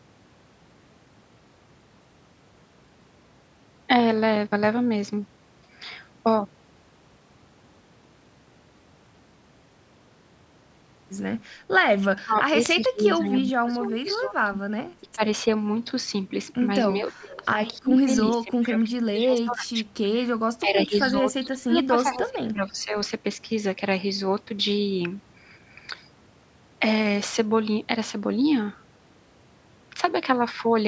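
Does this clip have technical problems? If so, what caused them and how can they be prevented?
Yes. There is speech suppressed in double talk at 12.24–12.57, 12.8–14.58, 15.02–15.22, 16.93–17.55, 17.71–18.1, 18.32–19.78 and 20.59–22.94 s. The voice dips by about 20 to 30 dB, in pieces. The likely cause is an echo canceller ducking this talker while the other side spoke. Using headsets, or an echo canceller with full-duplex double-talk handling, prevents this.

There is an echo leak at 18.25–18.31 s. A delayed copy of the voice, 317 ms late and about 10 dB down, slips back. It likely came from a loudspeaker whose echo canceller missed part of the pickup. Lowering speaker volume or using headphones prevents it.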